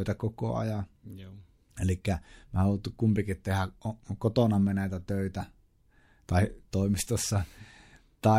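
From 6.50 s to the end of the speech, sample clock jitter sets in. The converter's clock wavers by a few microseconds, so each sample lands slightly early or late and picks up an error proportional to how steeply the waveform is moving. The result is a fine hiss riding on loud and bright passages, roughly 30 dB below the signal, gone in the pauses. A spectrogram shows broadband haze that tracks the speech energy and vanishes in gaps.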